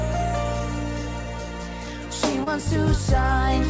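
At 2.44 s to 2.48 s the sound briefly smears and wobbles: short concealed packet loss. About 20 ms of audio arrived too late, and the receiver covered the gap by extending what came before it, then blended back into the real signal. The call path's band ends at 8 kHz, which fits a wideband codec such as G.722 at 64 kbps.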